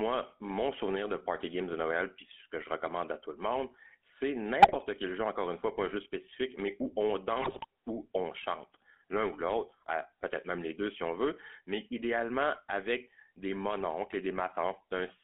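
Speech heard through the GSM full-rate codec, band-limited to roughly 250 Hz to 3.4 kHz, with a plainly audible buzzy, gravelly roughness from its coarse pulse excitation, unlike the smeared, swirly sound of modern low-bitrate codecs. GSM bit errors break in from 4.62 to 4.77 s and more heavily from 7.42 to 7.66 s as brief squawks, pops and gargling. Corrupted filter, pitch and gain values distort individual frames rather than leaving the silent gaps of dropped packets.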